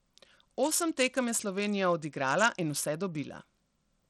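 A speech recording with plainly audible damage throughout, likely from Bluetooth SBC compression squeezed to a small bit pool, which fits roughly 80 kbps. The treble flickers in and out over a gritty grain. On a spectrogram the upper sub-bands look patchy and blocky, with aliasing smears.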